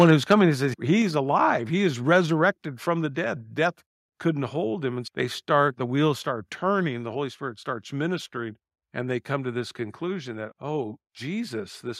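Right from the start, 0 to 0.34 s, there's microphone overload: the peaks run about 4 dB past the converter's ceiling, so a small slice of the waveform, around one or two percent, gets its tops sheared off. It sounds harsh and crackly, likely from the mic input set too hot. Then the level drops twice in single steps, at 1.02 s by about 3 dB and at 3.06 s by about 2 dB. That's the microphone volume stepped down, likely by the call software reacting to the clipping, and voice and background both get abruptly quieter.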